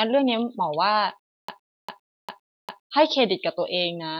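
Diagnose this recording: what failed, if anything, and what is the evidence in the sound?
Stutter with silent gaps, 1.28 to 2.88 s. A 197 ms burst of speech repeats four times, with 204 ms of silence between. Likely a stalled playback buffer.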